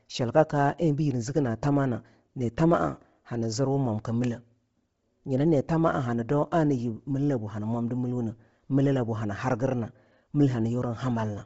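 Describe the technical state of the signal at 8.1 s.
At 8.1 s, as throughout, the speech stops at 7.7 kHz with a grainy, breathy top: likely heavy Bluetooth LC3 compression refilling discarded highs with noise.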